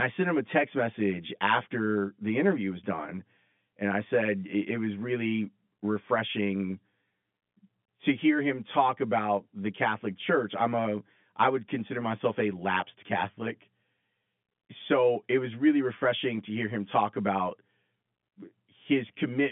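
Channel delay (comb filtering) runs throughout the speech. One channel lags the other by roughly 10 ms, so when they're summed to mono, shared content cancels at evenly spaced frequencies from around 50 Hz upward, making the narrow telephone-band sound hollow and phasey.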